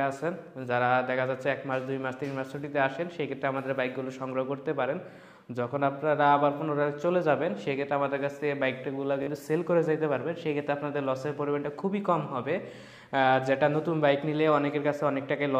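At 9.23 to 9.27 s, a Bluetooth stutter: dropped packets make the receiver replay its last buffer as a brief buzz, and sound resumes 43.5 ms later.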